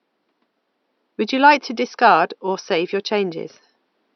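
The speech signal shows no technical faults, with only the room's own background noise present at about 53 dB below the speech level.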